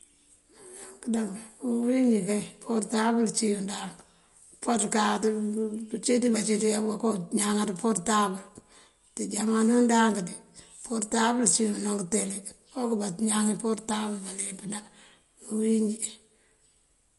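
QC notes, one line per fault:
Throughout, MP3 compression: the speech carries plainly audible codec damage, with nothing above 11.2 kHz and a watery, swirling texture as weak frequency components drop in and out between frames, which fits a low bitrate around 48 kbps, likely starving the encoder of bits.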